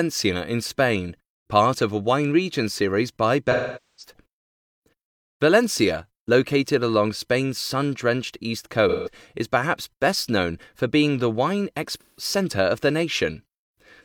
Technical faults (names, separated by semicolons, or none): AAC frame loss with concealment